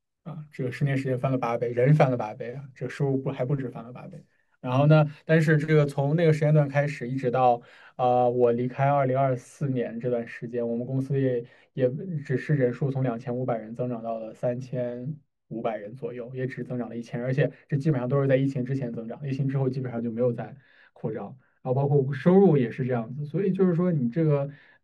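A speech recording in which, from 8.44 s to the end, de-emphasis has been applied wrongly: a treble-cut filter intended to reverse pre-emphasis has acted on material that either carried no such boost or had already been corrected once. The result is a smooth downward tilt across the upper spectrum, about 14 dB lower at 10 kHz relative to 1 kHz, so consonant detail and air are lost and the sound turns dull and muffled.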